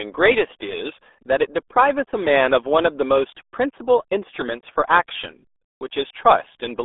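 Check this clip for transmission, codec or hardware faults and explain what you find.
The RealAudio 14.4 codec has degraded the whole clip. A speech coder sized for dial-up passes only about 300 Hz to 3.6 kHz, with nothing above 3.8 kHz, which fits a roughly 8 kbit/s rate. The speech is heavily muffled and gargly throughout.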